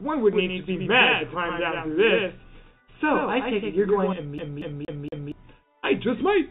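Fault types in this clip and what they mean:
Doubled audio track: From 0.33 to 4.13 s a second full-band copy of the sound runs about 100 ms behind the first and roughly 5 dB quieter. It has no decay or room colour and starts and stops abruptly. The likely cause is the same audio being captured again through a slower path.
CD stuck on one turn: From 4.38 to 5.32 s the same 234 ms stretch plays four times over, with a brief mute at each jump. The result is the fast, even stutter of a disc whose laser keeps skipping back one track.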